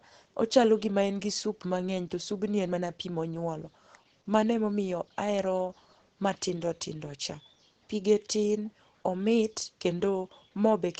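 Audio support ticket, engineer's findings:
Opus voice compression, whole clip. Speech muffled, slightly hoarse and robotic. No content above 9 kHz. Wideband SILK coder, excitation coded coarsely. Damage plainly audible, which fits a low bitrate around 12 kbps.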